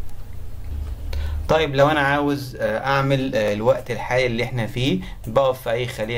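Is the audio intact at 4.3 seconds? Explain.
No. At 4.3 seconds the audio lies within a run of regular clicks or pops, spaced every 1.55 s, from 0.39 to 5.03 s. These are likely clock drift buffer slips, where two free-running clocks disagree by roughly 500 ppm and a block of a few dozen samples is dropped or repeated.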